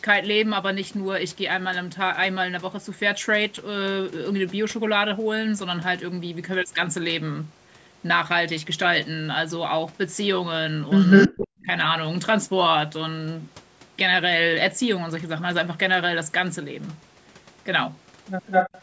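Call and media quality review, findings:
Echo leak, 11.1–11.64 s and 18.46–18.81 s. Delayed copy of the speech about 204 ms behind, roughly as loud as the original. Likely far-end loudspeaker pickup not fully removed by the echo canceller and returned.

Speech suppressed in double talk, 11.28–11.69 s, overlapping the first echo. Talker level dips deeply, around 40 dB at worst, for about a third of a second. Likely echo canceller unable to separate talker from echo, attenuating both.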